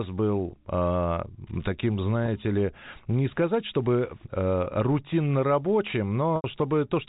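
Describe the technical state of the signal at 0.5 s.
At 0.50 to 0.52 s, a 20 ms stretch of the stream went missing, pointing to a single lost packet. The receiver concealed it with packet loss with pitch repetition, looping the last pitch period, which sounds like a brief held, slightly buzzy tone inside the telephone-band speech.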